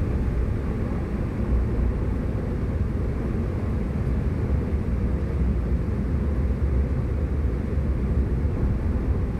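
Nothing here catches the ear as a technical fault; the everyday sounds come across without any glitch, dropout or distortion worth pointing to.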